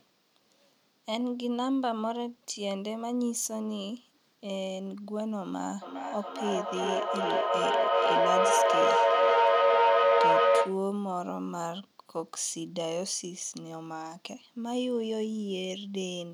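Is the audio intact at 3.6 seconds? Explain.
Yes, the speech at 3.6 seconds is intact, with no fault audible at that moment.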